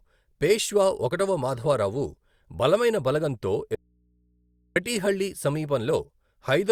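An audio dropout to a faint residue runs from 3.75 to 4.76 s in this speech clip, removing about 1.01 s of the signal. The speech cuts off abruptly rather than pausing or fading. The gap is not silent, though. It holds low mains hum roughly 40 dB below the speech. That points to the signal likely being lost upstream while the input after the break stayed live and open, picking up hum until the speech returned.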